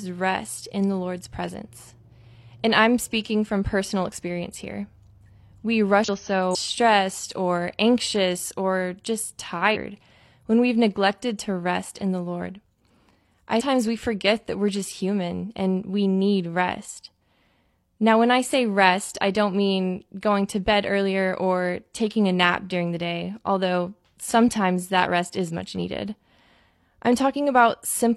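Damaged data in the compressed stream makes the decoder misread frames, lose sync and hunt for the next header. In this speech that gives brief chirps or blips of 50 to 60 ms at 6.04 s, 6.51 s, 9.71 s (after "or anxious or just") and 13.56 s (before "we forget that we're").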